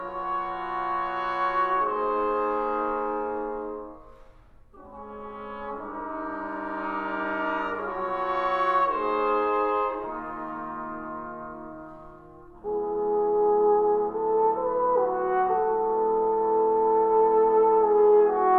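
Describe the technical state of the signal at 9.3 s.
At 9.3 s the signal is intact, with no audible fault at that point.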